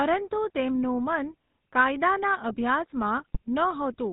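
Throughout, the speech passes through the GSM full-rate codec, consistent with a 13 kbps stream, leaving a buzzy, gravelly roughness and nothing above 4 kHz. From 3.18 to 3.38 s, GSM bit errors corrupt the decoder's filter, pitch and gain values, so the speech breaks into squawks, pops and gargling.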